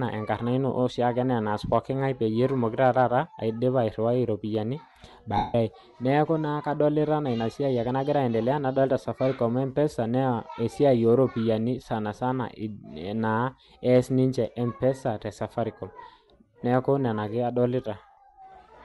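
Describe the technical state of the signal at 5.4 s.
Lost LE Audio frames affect 5.37 to 5.54 s, a gap of about 0.17 s, which fits around 23 dropped 7.5 ms frames. The decoder kept replaying the last spectrum with randomised phase, so the speech smears into a noisy wash that fades toward silence before normal sound returns.

Bluetooth LC3 compression is also plainly audible at this point, likely the cause of the grainy, breathy edge on the speech, where upper frequencies are replaced with filled-in noise, consistent with a bitrate of about 48 kbps.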